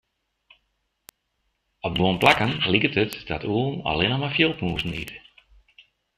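Four bit error spikes cut through the speech at 1.09, 2.22, 3.13 and 5.08 s. Each sounds like one dry, full-band tick, short enough to suggest a single corrupted sample. A flipped bit throws the value up by a power of two and it drops straight back. The peaks reach about -9 dBFS, and about -3 dBFS at 3.13 s. Unlike a dropout click, nothing goes missing around them, and they bear no relation to the speech's level.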